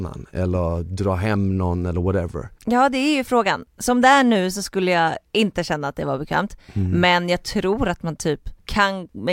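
No technical faults are audible in this recording.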